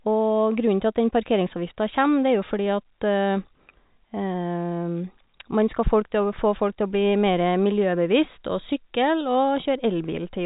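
Speech over G.711 telephone coding, band-limited with nothing above about 3.8 kHz as that path dictates, and no technical fault to report.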